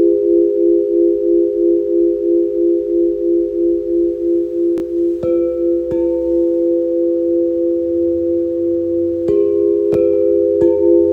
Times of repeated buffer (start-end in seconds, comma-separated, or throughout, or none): 4.78-4.82, 9.94-9.96